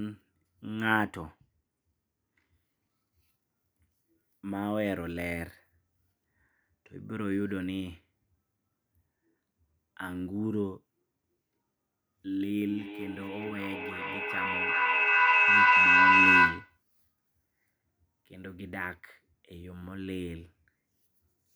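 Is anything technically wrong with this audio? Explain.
Yes. From 12.68 to 16.82 s there is feedback echo between two devices. Speech returns roughly every 0.4 s, building to about 11 dB above the voice, because another device's playback re-enters the microphone.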